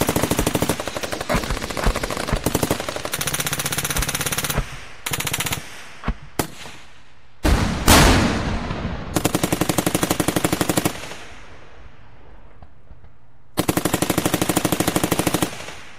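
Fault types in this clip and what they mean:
Lost LE Audio frames: at 1.26–1.37 s and again at 12.01 s, the LC3 decoder fills dropped Bluetooth frames by replaying the last spectrum with random signs, leaving a brief noisy smear. The first burst loses about 75 ms in short gaps, the longest roughly 30 ms.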